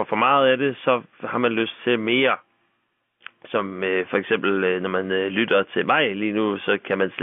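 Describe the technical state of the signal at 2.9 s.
At 2.9 s the speech is intact, carried cleanly through its G.711 telephone coding with no fault present at that moment.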